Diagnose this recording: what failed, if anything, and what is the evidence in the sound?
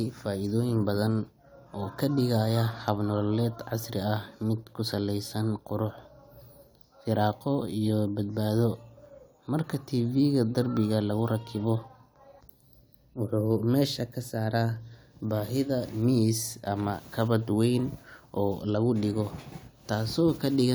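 No stage in the chain shows a failure; the speech runs without any audible break, glitch or distortion that would point to a fault in capture, conversion, transmission or playback.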